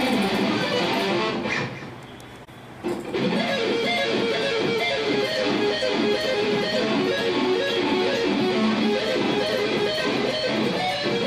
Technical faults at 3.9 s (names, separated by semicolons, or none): none